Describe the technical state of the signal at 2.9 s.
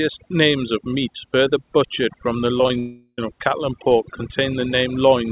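At 2.9 s the sound is already broken off. Just after "further butchered from the", the last moment of sound is stretched into a buzzy, fading hiss for about 0.38 s, with a brief silence of about 20 ms before the speech resumes at "of cattle and pork". About 0.39 s of audio never arrives. This is most likely a long network dropout spanning 2.79 to 3.19 s, where the receiver extended the last sound it had to cover the gap.

Underneath, the same moment carries overdone noise removal. The background sits at near silence with twinkling specks. A noise reduction stage set too aggressively is pushing individual frequency bands down or off whenever they approach its noise estimate, and quieter parts of the voice are being taken with them. This all happens within the narrow band of the G.711 call path, which carries nothing above 4 kHz.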